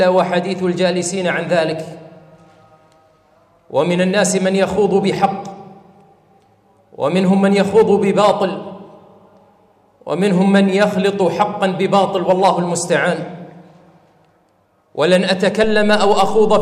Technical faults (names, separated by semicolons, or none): DC step